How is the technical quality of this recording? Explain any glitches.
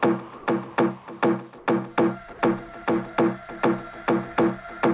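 The recording has two short glitches in its quiet passages, and the band-limited sound stops at 4 kHz, which fits a G.711 mu-law call path.

Comfort noise in place of the background, at 0.38 to 0.47 s and again at 1.58 to 1.67 s, 90 ms each. This is likely discontinuous transmission: the sender paused when it detected no active signal, and the receiver filled the gap with synthetic noise. The real background, about 24 dB and then about 30 dB below the loud parts, briefly becomes a flat, featureless hiss. It is about 1 dB quieter the first time and at the same level the second.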